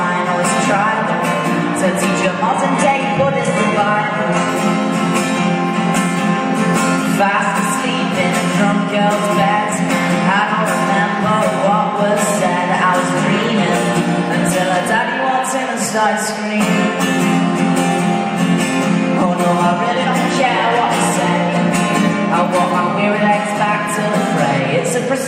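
From 2.49 to 4.49 s the adaptive stream runs at a lower bitrate: nothing above 11.4 kHz, abrupt switches, no dropout gap.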